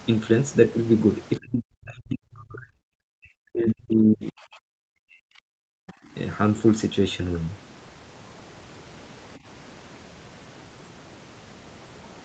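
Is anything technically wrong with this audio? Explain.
Yes. There are two kinds of fault, both tied to echo cancellation.

Speech suppressed in double talk occurs at 1.38–2.77 s, 3.17–4.35 s and 4.75–5.31 s. The speech level drops sharply, by roughly 40 dB at its deepest. The likely cause is that both ends were talking at once, so the echo canceller could not separate the local talker from loudspeaker echo and attenuated both.

Background gated by the echo canceller occurs at 5.59–6.14 s. The room sound drops by about 40 dB for about half a second, then returns. The canceller clamped the microphone hard while the loudspeaker was active and released it afterwards.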